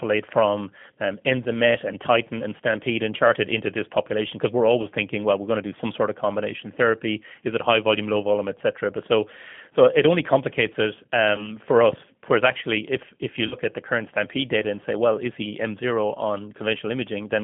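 Throughout, the speech carries the sound of the G.729 codec at 8 kbit/s. The line is confined to roughly 150 Hz to 3.4 kHz, and the coder rebuilds each 10 ms frame from a vocal tract filter, a pitch predictor and a handful of pulses. That gives a plainly audible rough, slightly synthetic texture. It differs from simple band-limiting, which would sound muffled but clean rather than grainy.

At 4.82 to 4.87 s the first instance of VoIP packet loss concealed by the speech codec appears. A gap that fits one lost 20 ms packet is filled by the decoder extending its last pitch and filter, so the sound smears into a brief stretched continuation. It returns to full strength only after about 50 ms. Unlike a plain dropout, there is no silence, only a stretched, fading continuation. The same happens at 11.36 to 11.56 s, where recovery drags on for about 0.2 s as each rebuilt frame leans on the previous one.

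From 11.93 to 12.14 s a phantom power thump is heard, a deep low-frequency bump from a supply step passing through the input's coupling capacitors. Its main energy dies away in about 46 ms. It is a single deep knock, not a tonal smear, which separates it from the concealment artefacts on either side.

At 13.47 to 13.55 s a longer concealment fits two consecutive lost packets, about 40 ms, with a fading decay before the speech recovers.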